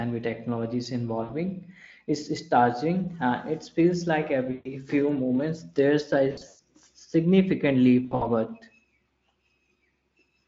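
VoIP packet loss concealed by the speech codec strikes at 1.23, 4.51, 6.31 and 8.05 s. Each gap is extrapolated into a buzzy tone or coloured noise that fades, visible under a decaying envelope.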